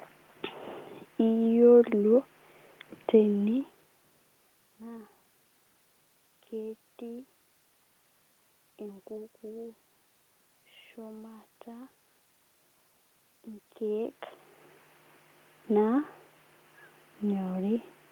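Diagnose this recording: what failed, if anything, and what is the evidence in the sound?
Nothing failed; no fault in any stage is evident.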